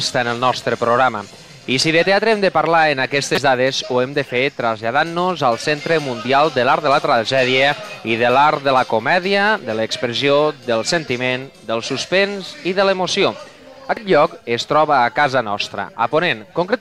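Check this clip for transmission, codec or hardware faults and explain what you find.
Two short faults, both from damaged data in a compressed stream. At 3.34 to 3.38 s, and again at 13.97 s, part of the encoded stream arrived wrong, with bytes lost, zeroed or overwritten. The decoder misreads or rejects the affected frames, loses sync and hunts for the next valid frame header before resuming. Each time this produces a brief glitch, a chirp or blip. The first lasts about 36 ms, and the second is near-instant.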